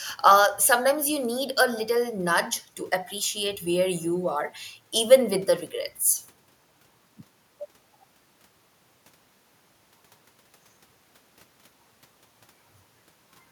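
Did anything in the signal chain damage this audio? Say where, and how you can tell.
No, nothing along the chain has marked this speech, and the only extra sound is a bit of room noise sitting about 42 dB below the talker, which belongs to the recording space rather than to any equipment.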